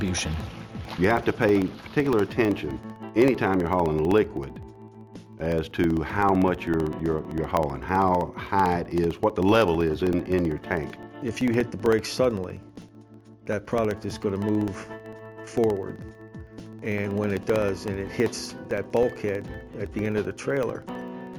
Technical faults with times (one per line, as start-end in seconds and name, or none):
0.08-21.34 periodic USB or driver dropouts